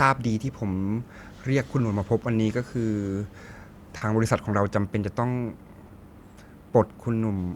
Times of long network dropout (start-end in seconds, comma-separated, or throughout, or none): none